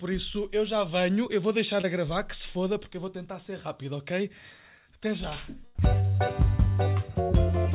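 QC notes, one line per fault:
1.82–1.85 s, short concealed packet loss: a brief smear or wobble where about 20 ms of audio never arrived in time. The receiver covered roughly 17 ms of it by extending the last sound, continuing its pitch if it was voiced or shaping noise if not, then crossfading back into real audio. The bandwidth stops at 4 kHz, consistent with a G.711 mu-law call path.
5.65–5.77 s, burst of packet loss: around 100 ms went missing in one run, and the receiver filled about 95 ms by continuing the preceding sound while turning it down across the gap. That produces a held buzz if the sound was voiced or a fading hiss if not. Playback then resumes further along, so the material from that stretch is lost rather than delayed.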